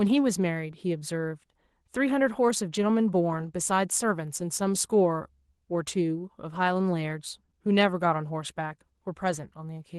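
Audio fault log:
No fault appears in the audio fault log for this speech.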